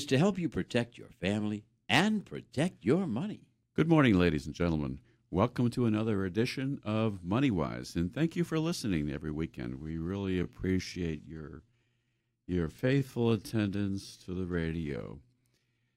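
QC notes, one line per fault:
9.69–15.97 s, time-stretched section: from here to the end the speech abruptly slows to 0.7 times its pace while pitch stays put, so it drags. This likely comes from software lengthening the passage by repeating short slices to hold pitch.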